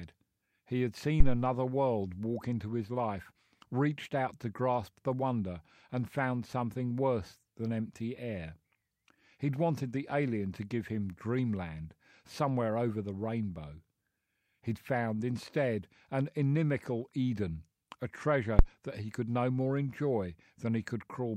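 At 1.20 to 1.41 s and again at 18.59 to 18.65 s, a phantom power thump cuts into the speech. A supply switched on or off on a live input sends a voltage step through the coupling capacitors. Each is a deep low-frequency bump peaking at about -7 and -6 dBFS and dying away in 47 and 14 ms, seen as a lopsided spike and a bright smear at the bottom of the spectrogram.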